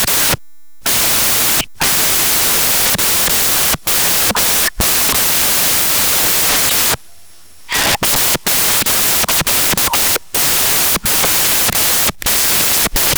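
From the first moment to the end, the speech is buried under samples built from the wrong bytes: each sample's bytes are assembled misaligned or in swapped order, so the rapidly varying low-order bits dominate. The result is loud, harsh broadband noise.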